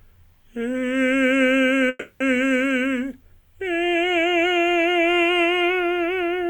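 A call audio freeze interrupts this music clip from 1.89 to 2.22 s: the last sound is stretched into a fading buzzy tail that fills about 310 ms, with no silence, and then the music picks up exactly where it stopped, so nothing is lost but everything after runs about 310 ms later. The likely cause is packets held up in transit, emptying the jitter buffer so the receiver had to improvise until they arrived.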